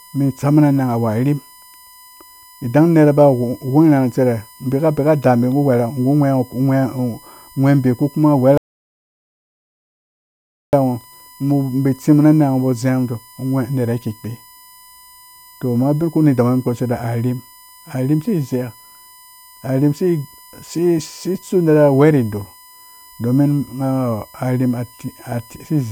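A steady USB whine runs through the whole clip. It is a fixed tone at 1 kHz, sitting roughly 30 dB below the speech. The pitch never moves. This happens when a USB audio device draws current in regular 1 ms frames. That pulsing load leaks into the analogue path through the shared power or ground. A 1 ms rhythm produces a 1 kHz tone.

At 8.58 s a rebuffering stall begins. The speech cuts abruptly to silence. It holds until 10.73 s, then picks up exactly where it stopped. The player had run out of downloaded audio and waited for more to arrive. No speech is lost, but the gap adds about 2.16 s to the running time.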